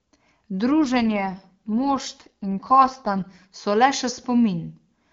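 From 0.84 s to 3.56 s the speech turns rougher and more synthetic, with a raspy, buzzy edge, but it keeps the same bandwidth and never drops out. Then it clears again. This is an AMR rate drop: the network pushed the AMR-WB (HD Voice) codec down to a lower mode and spent the freed bits on error protection. The sound fits a fall from 23.85 to about 8.85 kbit/s, and then a return to the clean top rate.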